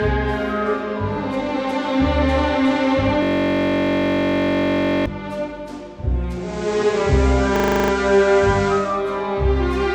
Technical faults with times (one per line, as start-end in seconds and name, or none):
3.23-5.06 system hang loop
6.34-9.05 digital radio blending to analogue
7.56-7.92 system hang loop